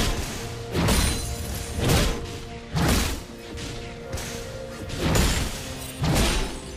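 No technical faults can be heard anywhere in this audio. Nothing in the sound points to a problem in how it was captured, processed or played back.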